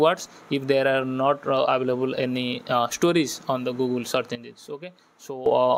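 At 4.35 s a sudden gain jump drops sound and background noise together by about 12 dB until 5.46 s. A gain step applied without a ramp is the likely cause.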